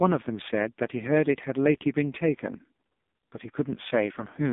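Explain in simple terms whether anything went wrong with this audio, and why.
The speech has been squeezed through the AMR narrowband mobile codec, the phone-call format used on older mobile networks, from start to finish. Only a narrow slice of sound survives, roughly 200 Hz to 3.6 kHz, with nothing above 3.7 kHz, so the voice sounds thin and boxed-in. The codec rebuilds the voice from a simple model with very little data, so the damage is heavy: a buzzy, synthetic, robotic edge throughout.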